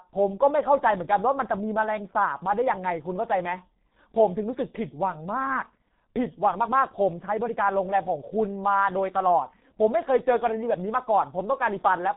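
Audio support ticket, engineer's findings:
Speech muffled and hoarse for the full clip, consonants smeared. G.723.1 codec, heavy damage. Nothing above 3.8 kHz. Low bitrate, fits 6.3 kbit/s. Coarse 30 ms frames and a slowly updated voice model blur fast transitions. Narrowband telephony path.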